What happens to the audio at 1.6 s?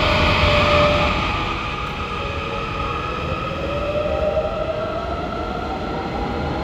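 At 1.6 s the sound is dropping in level with a ticking riding on it, a zipping texture that runs from 0.76 s to 1.84 s. This is zipper noise: the fade is applied in coarse 2 dB jumps, around five per second, with no smoothing between them, so each abrupt gain change leaves a small click. Together the steps take the level down by roughly 10 dB.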